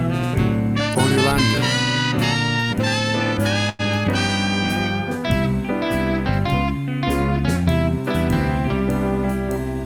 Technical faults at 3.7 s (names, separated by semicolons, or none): short stall from a late packet